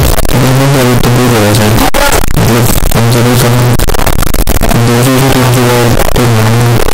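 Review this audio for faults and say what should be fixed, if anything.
The whole clip, start to finish, is a wall of harsh, buzzing distortion over the speech, and soft sounds come out just as loud as strong ones. That points to a signed and unsigned mix-up, most likely 8-bit samples being read with the wrong signedness: the top bit flips, so every zero crossing leaps across the full range. To prevent it, make the reader's sample format match the writer's signedness.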